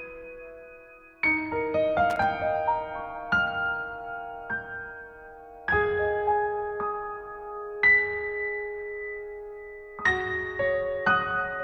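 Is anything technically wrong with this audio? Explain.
Yes. From 2.10 to 2.24 s there is loose connector crackle. A worn or dirty contact keeps making and breaking as it shifts. That chops the signal in fast, irregular bursts. It is heard as a short scratchy crackle lasting about 0.14 s.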